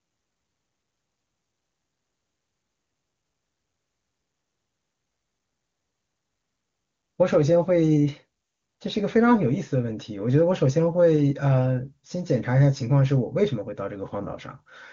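No technical faults are present in the speech: it passes through the AMR wideband (HD Voice) codec at 23.85 kbit/s, the top rate, so any coding damage is faint at most, and the band stops at about 7.2 kHz as that codec's limit dictates.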